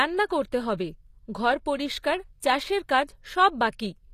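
Throughout, s sounds are gritty and lispy under bright, copied treble ending at 14.9 kHz, likely HE-AAC compression; a plain low-pass would sound dull.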